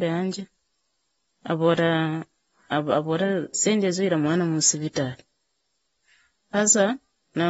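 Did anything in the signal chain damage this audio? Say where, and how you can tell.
Yes, at the codec stage: the speech is dull and smeared throughout, with nothing above 7.6 kHz, likely AAC compression at a low bitrate around 24 kbps discarding high bands.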